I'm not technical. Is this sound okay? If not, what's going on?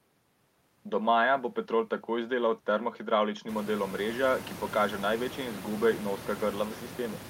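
Yes, no system faults here; the background noise of the room gets noticeably louder around three and a half seconds in, but that is part of the recording itself and stays well beneath the speech.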